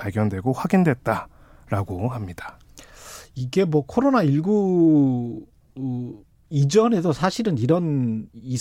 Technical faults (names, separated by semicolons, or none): drift correction step